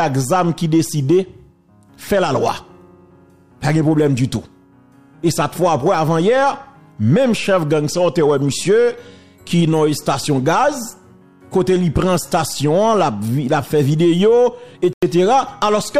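Near the end, at 14.93 s, the audio drops abruptly into silence until 15.03 s. That is a corrupt frame muted. Some bits in the compressed stream were flipped, and the decoder rejected the damaged data. The player filled the gap with silence instead. The hole lasts about 94 ms, which fits a single lost frame. The cut-in is sudden, not faded. The sound then resumes in its proper place, because timing is kept.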